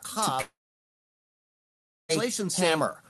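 From the start, the speech carries a doubled audio track, most likely because the signal was captured a second time over a slower route and mixed back in. A full-band copy trails the original by about 0.7 s at roughly 5 dB lower, with no decay or room colouring, so each phrase is followed by a flat, detached repeat that smears the words. It is audible alongside the call path's Opus coding, whose band stops near 12 kHz.

From 0.41 s to 2.11 s comes a long network dropout, likely packets that never reached the receiver for about 1.7 s. The receiver stretches the last sound into a short fading buzz, then roughly 1.6 s of silence follows. When the audio resumes at 2.11 s, it picks up further on, and the missing stretch is never played.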